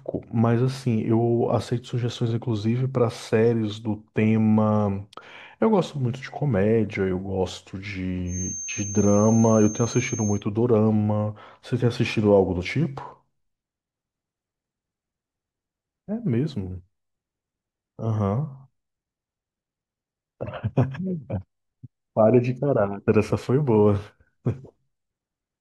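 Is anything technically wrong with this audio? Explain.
Yes. From 8.24 to 10.44 s, a speaker-to-microphone loop likely poised at the edge of feedback produces a feedback whistle: a steady 6.4 kHz tone that swells and fades slowly in level, about 15 dB below the speech.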